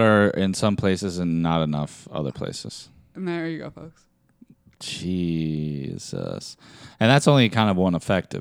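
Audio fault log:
5.06–8.40 s: sample clock jitter. The converter clock wavers by a microsecond or so. This adds hiss roughly 40 dB below the speech, rising on loud, bright sounds.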